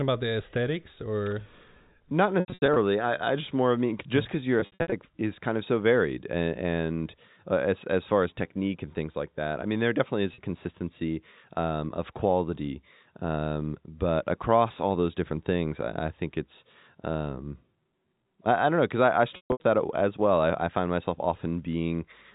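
Packet loss with pitch repetition hits the speech at 2.4–2.76 s, 4.6–4.92 s, 10.34–10.38 s and 19.36–19.64 s. Missing stretches are bridged by repeating the last pitch period, giving brief buzzy, held sounds. The first ends just before "I I just more". The second follows "mean just because your". The third sits between "mean there definitely is" and "consistency um of quality". The last contains the longest gap, 140 ms, and may briefly fade toward silence. All this sits on G.711 telephone audio, capped at 4 kHz.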